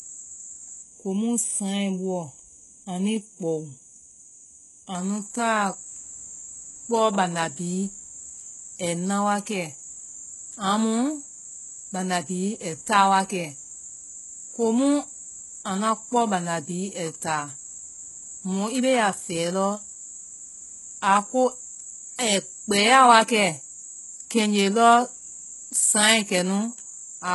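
Speech runs throughout, with heavy codec damage from start to finish. Nothing reaches above 11.5 kHz. The treble that remains sounds rebuilt rather than captured. It is copied up from lower bands and shaped only roughly, so its harmonics do not line up with the real ones below. This points to HE-AAC compression, likely at a very low bitrate of about 12 kbps. The spectral band replication makes s sounds gritty and metallic.

From 0.82 s to 4.95 s there is channel delay, heard as comb filtering. It ends just before "anu ta". One channel runs late by about a third of a millisecond, and the two are summed to mono. What they share cancels at evenly spaced frequencies, with the first notch near 1.5 kHz. The notches stay fixed, so this stretch sounds hollow and phasey.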